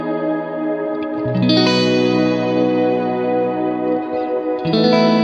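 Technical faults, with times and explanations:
No technical faults can be heard in this audio. Nothing in the sound calls for a time or an explanation.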